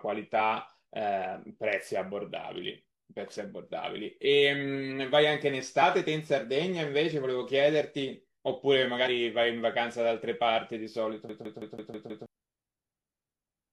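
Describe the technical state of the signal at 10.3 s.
At 10.3 s the speech signal is intact, with no audible fault at that moment.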